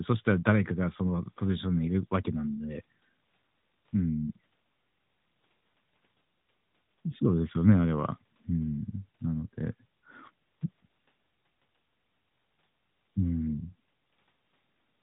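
No faults detected in this speech.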